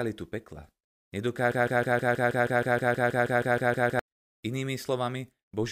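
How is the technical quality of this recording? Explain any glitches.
There's one real problem: a broken-record loop from about 1.52 to 3.99 s. For roughly two and a half seconds, a tiny slice of speech, about 159 ms long, plays over and over, back to back, around 16 times, giving that stuck, stuttering machine-gun effect. The likely cause is the player or stream stalling and resending the last fragment it had in its buffer. Whatever speech belonged in that stretch is simply gone.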